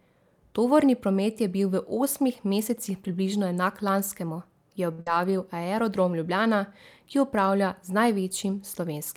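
At 4.92 s there is a short stall from a late packet. A packet missed its slot and the jitter buffer ran dry. The receiver held the last sound for about 62 ms, then carried on. Nothing is lost, but playback now runs 62 ms later.

Right after, from 5.02 to 5.07 s, comes a burst of packet loss. Consecutive audio went missing. The receiver extended the last speech for about 47 ms, fading it into a brief buzz or hiss. About 60 ms of speech is skipped when playback resumes.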